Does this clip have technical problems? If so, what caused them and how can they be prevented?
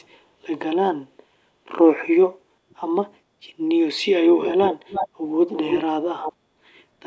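Yes. Delayed copies of the speech come back four times: a barely audible scrap at 2.70–2.75 s about 0.4 s behind the original, then much stronger repeats at 4.41–5.09 s and 5.47–5.81 s, nearly as loud as the speech and trailing it by 0.31 s, and a somewhat quieter one at 6.20–6.33 s with the same lag. This is an echo leak, most likely a far end playing the call over a loudspeaker whose echo canceller let its microphone pickup pass back. Using a headset, or a device with a properly adapted echo canceller, prevents it.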